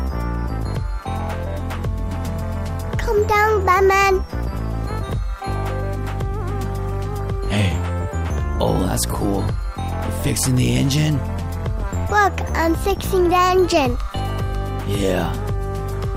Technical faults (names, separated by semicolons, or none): none